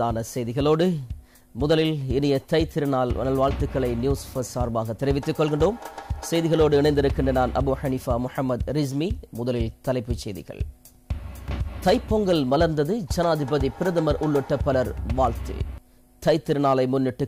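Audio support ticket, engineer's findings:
Faint regular ticks, about five per second, 0.17–17.26 s. Clock slip clicks: likely unsynced device clocks around 100 ppm apart, slipping single samples.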